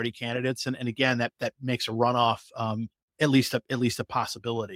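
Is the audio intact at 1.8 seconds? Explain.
Yes, the speech at 1.8 seconds is intact, with no dropout, click, distortion or other fault at that moment.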